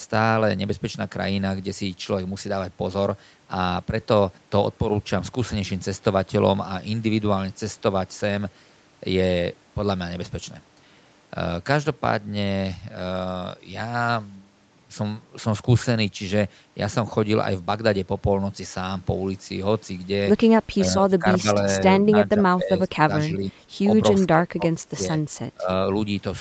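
Speech that ducks at 20.7–21.48, 22.29–23.11, 23.27–23.53, 24.3–25.15 and 25.54–25.69 s, dropping by up to about 25 dB. This is likely speech suppressed in double talk by the echo canceller.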